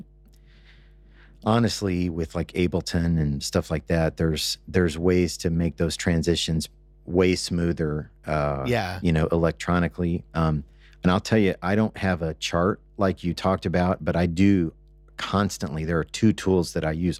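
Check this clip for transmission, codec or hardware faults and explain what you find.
One hardware fault runs through this speech clip. Mains hum is present throughout: a steady 50 Hz tone, well below the speech, from power-line coupling through a ground loop or nearby transformer.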